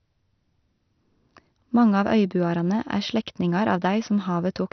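From start to end, the speech is dull and gurgling, with a granular edge. Nothing sounds above about 6.2 kHz. Upper sub-bands are switched off and the rest coarsely quantised. This is likely heavy MP2 compression, which fits a low rate near 48 kbps.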